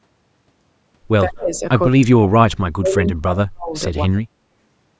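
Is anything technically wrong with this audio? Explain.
Yes, there are two faults, and the suppression is tied to both ends of a call talking at once.

Speech suppressed in double talk occurs from 1.26 to 1.62 s, with about 0.3 s affected and the level dropping by up to about 35 dB, and again from 1.84 to 4.45 s, with about 2 s affected and drops of up to about 40 dB. The likely cause is an echo canceller that could not separate the near talker from loudspeaker echo while the other side spoke, so it turned everything down. The speech dips and breaks into pieces. Unlike packet loss, these are level cuts that follow the overlap rather than clean gaps of silence.

Echo leak briefly appears from 1.54 to 1.59 s as a scrap of delayed speech arriving 136 ms late, about 25 dB below the main speech. This is likely residual loudspeaker sound that the far end's echo canceller failed to remove and sent back. 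Because it is a distinct copy at a fixed lag, it differs from room reverberation, which would trail off smoothly instead. The call's microphone processing, with nothing above 8 kHz, accompanies all of this.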